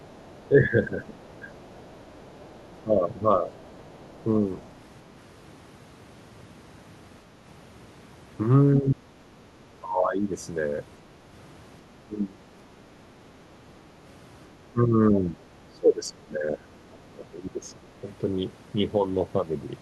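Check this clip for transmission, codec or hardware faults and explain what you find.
Two echo-control faults affect this speech recording: the far end leaks into the talker's line, and the talker is repeatedly suppressed while both sides speak.

Other side's voice leaking through, 0 to 4.7 s: the echo canceller likely left part of the loudspeaker signal in the microphone feed. A faint second voice sits beneath the talker for the first few seconds, around 30 dB below the main speech.

Speech suppressed in double talk, at 0.48 to 1.46 s, 2.84 to 3.25 s, 8.8 to 10.24 s, 12.04 to 12.42 s and 14.72 to 17.92 s: the canceller likely could not separate the talker from the echo and attenuated both. The talker's voice dips or drops out in pieces. The shallowest dip is about 10 dB, in the first stretch. The deepest is about 30 dB, near 9 to 10 s. The longest run, 14.7 to 17.9 s, is affected for roughly two seconds in total.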